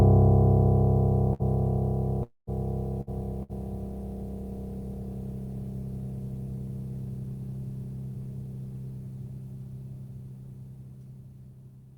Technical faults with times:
1.33-1.42 burst of packet loss
2.23-2.50 long network dropout
3.01-3.10 burst of packet loss
3.43-3.52 burst of packet loss

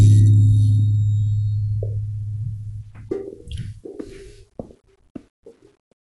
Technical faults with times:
0.00-6.19 Dolby Digital compression

